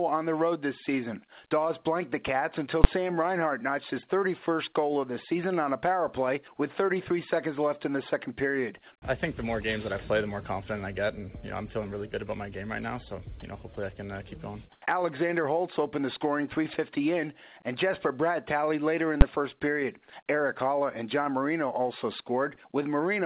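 Audio carried over a call path whose band stops at 4 kHz, which fits a G.711 mu-law codec at 64 kbps, shows three kinds of fault. A calculation twice produced invalid numbers at full scale, forcing a 10 ms block to the maximum value. Each block is so short that it is heard as a single loud bang, at 2.84 s and again at 19.21 s. From 13.40 to 13.42 s, the sender's voice detector likely judged the sound to be background and stopped transmitting, so sound was dropped by the voice detector. The receiver filled the gap with synthetic noise, and about 10 ms of the real sound is missing before it returns. From 14.72 to 14.82 s, the background appears to have been replaced by comfort noise during a discontinuous-transmission pause. For 100 ms, the detailed background, which sits about 35 dB below the loud parts, gives way to a steady, featureless hiss that is about 4 dB quieter.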